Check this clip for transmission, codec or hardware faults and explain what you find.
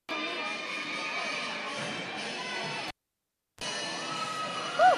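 One hardware fault: a cable pulled and plugged in, from 2.88 to 3.64 s. A pop drops the sound for 0.71 s. A 33 ms burst of 50 Hz mains buzz and a second pop mark the reconnection.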